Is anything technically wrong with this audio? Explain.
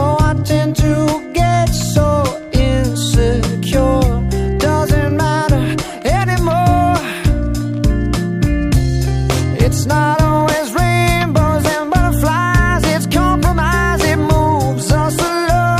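No, nothing is technically wrong with this audio.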